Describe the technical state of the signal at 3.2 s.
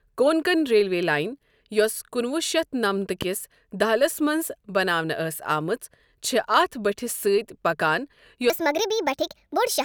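A single loud pop sits at 3.22 to 3.24 s, just before "کِس دہلِس منٛز". It peaks roughly 10 dB above the speech, which carries on beneath it. A sudden voltage step, likely from a plug, switch or static discharge, caused this brief thump.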